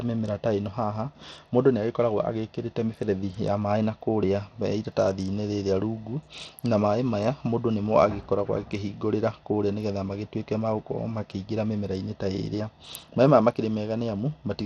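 A speech clip carrying likely Bluetooth SBC compression throughout, at a data rate that fits roughly 80 kbps: the codec starves its upper sub-bands of bits and quantises the rest coarsely, so the treble drops out and flickers while a plainly audible gritty, aliased noise rides on the sound.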